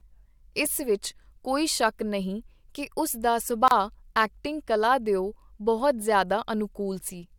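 At 3.68 to 3.71 s the speech drops into a gap at a join of encoded pieces. A gap of about 31 ms sits between separately encoded segments. Edges are smeared by the codec, so the silent part is shorter.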